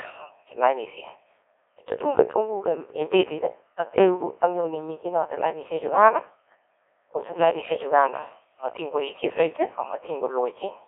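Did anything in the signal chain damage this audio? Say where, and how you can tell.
Yes. Throughout, the speech sounds robotic and buzzy, confined to a band of roughly 250 Hz to 3.5 kHz with nothing above 3.6 kHz. That points to the codec stage: a Codec 2 vocoder, fitting about 1.6 kbit/s, rebuilding the voice from sine waves instead of preserving the waveform.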